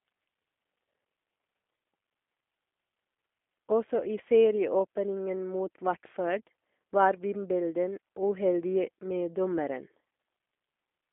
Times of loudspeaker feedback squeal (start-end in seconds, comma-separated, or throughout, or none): none